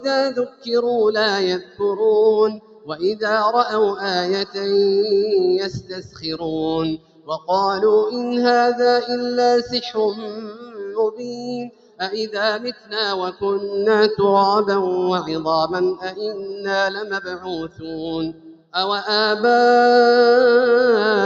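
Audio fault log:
Throughout: noise suppressor applied to music or sounds. A suppressor tuned for speech stays engaged on this non-speech material, treating sustained tones, ambience and reverberant tails as noise. Its gain keeps shifting by around 10 dB, so onsets come through while held sound sinks, giving a pumping, thinned character. What sets this apart from an ordinary compressor is that the gain follows how noise-like the sound is, not how loud it is. The 8 kHz top end comes from the call path.
0.0–0.71 s, 1.59–1.81 s, 2.53–3.24 s, 5.75–6.43 s, 6.97–7.49 s, 9.64–12.01 s, 12.72–13.43 s, 15.96–18.75 s: sound cut by the noise suppressor. In each span the suppressor judges the sound to be noise and pulls it down by about 14 to 17 dB at its deepest. Most spans lose a few hundred milliseconds. The long stretches near 9.6–12.0 s and 16.0–18.8 s lose roughly two seconds each. Unlike a dropout, the sound sinks instead of vanishing, and attacks still survive.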